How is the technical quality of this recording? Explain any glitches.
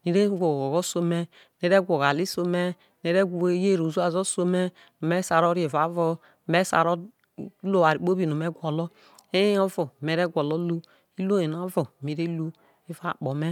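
No glitches turn up anywhere in this recording, so there's nothing here that needs explaining.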